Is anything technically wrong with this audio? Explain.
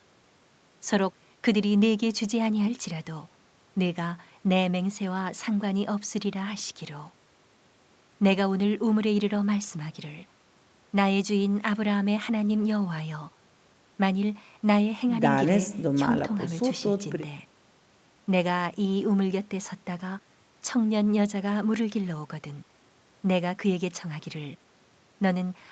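No, nothing technically wrong can be heard here.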